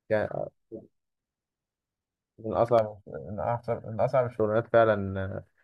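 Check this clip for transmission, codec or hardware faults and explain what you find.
One fault appears, a channel delay causing comb filtering. From 2.79 to 4.38 s the speech turns hollow and phasey. One channel lags the other by roughly 1.5 ms, and summing them to mono cancels evenly spaced frequencies, with the first notch near 400 Hz.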